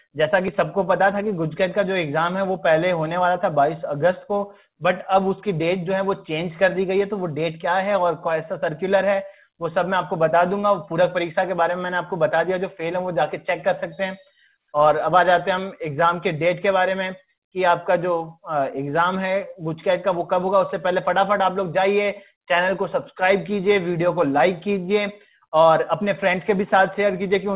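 No technical faults are audible.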